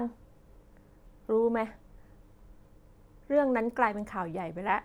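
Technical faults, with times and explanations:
No technical faults are present in this speech recording.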